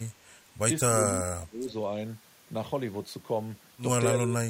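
From 0.92 to 1.74 s the speech level is pulled down in patches, falling by about 25 dB at its deepest and adding up to around half a second of suppressed sound. A shorter dip of about 20 dB returns from 4.22 to 4.49 s. This is speech suppressed in double talk. The echo canceller likely failed to tell the near talker from loudspeaker echo while both sides spoke at once, and attenuated everything together.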